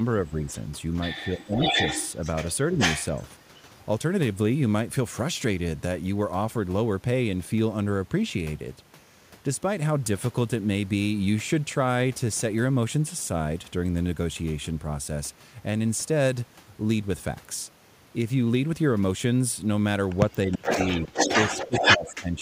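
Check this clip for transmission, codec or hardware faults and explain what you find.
Two faults appear: speech suppressed in double talk, and echo leak.

Speech suppressed in double talk occurs at 0.17–0.5, 1.36–1.78, 2.71–2.76, 20.45–21.05 and 21.47–22.42 s. The speech dips by about 5 to 30 dB, deepest in the 20.45–21.05 s stretch. The echo canceller likely mistook overlapping talk for echo.

An echo leak occurs at 0.48–0.53 s, where a faint copy trails by 329 ms. Louder copies follow at 1.58–3.23 and 20.31–22.14 s, delayed 417 ms and about as loud as the speech. Residual loudspeaker pickup likely escaped cancellation.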